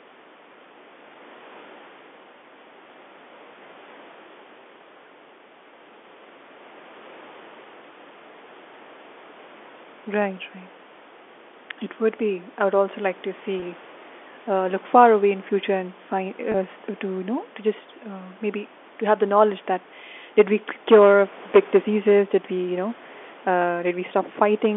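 At 13.60 to 13.62 s, after "would also like to", and 16.52 to 16.54 s, after "in future and find", packet loss with pitch repetition repeats the last pitch period, giving a brief buzzy hold rather than a silent gap, which fits one lost 20 ms packet.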